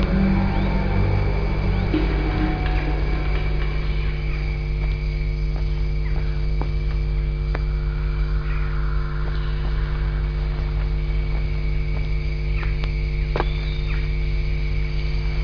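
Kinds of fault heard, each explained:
No technical faults are audible anywhere in the recording.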